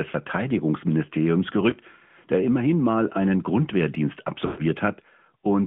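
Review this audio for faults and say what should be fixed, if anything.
The whole clip carries the sound of the AMR narrowband mobile codec, and the damage is plainly audible. Speech is confined to a phone band of roughly 150 Hz to 3.4 kHz, and the vocal-tract model fed with sparse pulses gives a buzzy, synthetic edge. The degree of coarseness fits the 10.2 kbps mode. On a spectrogram, energy stops flat at 3.4 kHz with nothing above, and the harmonics look smeared. To prevent this, capture or route the call over a wideband or higher-rate path instead of narrowband AMR.

Lost AMR speech frames occur twice. From 1.70 to 1.74 s, just before "der immerhin mal einen", there is a short dip or warble consistent with a single missing 20 ms frame that the decoder patched by repeating its last parameters. From 4.46 to 4.62 s, the concealment runs longer, about 120 ms, which fits six consecutive frames. 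The sound drags out and fades toward silence, then returns weak or rough. A spectrogram shows frozen, repeated formant bands that fade, and the waveform envelope tapers and then recovers. Preventing this requires a cleaner radio link or stronger error protection and retransmission.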